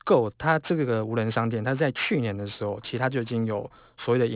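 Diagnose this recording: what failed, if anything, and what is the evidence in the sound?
Aliasing runs through the whole clip, introduced at the sample-format conversion stage by a downsample with no proper anti-aliasing filter. Sibilants come out gritty and metallic, and the spectrum runs hard up to a 4 kHz band edge, which points to a drop from 48 kHz to 8 kHz. Speech energy above 4 kHz was never removed, so it folds back into the band as unrelated tones, roughly 20 dB below the speech.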